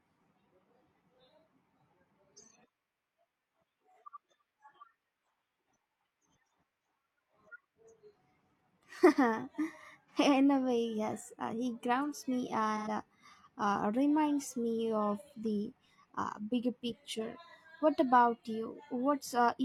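AAC frame loss with concealment smears the speech into a brief noisy, phasey patch at 10.08 s (about 43 ms, fitting one frame) and at 12.77 to 12.88 s, between "uh he grounds me" and "uh uh reminds me" (about 85 ms, fitting two). The decoder rebuilds each gap from the last good spectrum, so these patches are filled with sound rather than dropping to silence.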